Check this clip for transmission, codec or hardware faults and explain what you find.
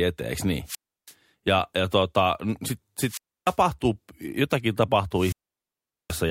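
The clip has wireless microphone squelch dropouts, three of them. They run from 0.64 to 1.14 s after "eteen niin", from 3.05 to 3.57 s after "ja tota sit", and from 5.13 to 6.24 s. The analogue FM radio link fades, and the receiver's squelch mutes the output. Each dropout begins with a short rise of hiss or static. Then comes a hole of near silence lasting about 330 ms, 300 ms and 780 ms. After that the speech returns.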